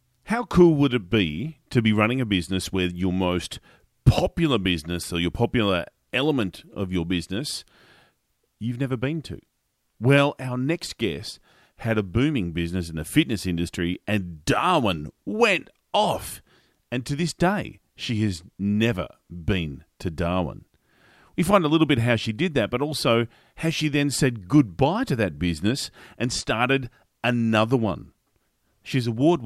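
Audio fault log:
No faults heard.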